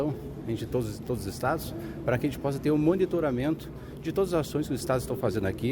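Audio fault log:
Nothing stood out on listening to this clip.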